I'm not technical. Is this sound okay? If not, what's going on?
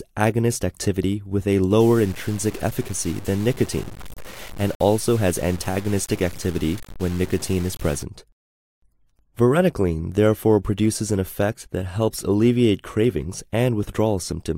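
No. From 1.81 to 8.03 seconds the sound turns grainy and gritty, with a rough fizz that rises and falls along with it, and the quietest moments sputter or drop out. This is low bit depth without dither, likely from the audio being cut down to about 6 bits and chopped off without smoothing noise.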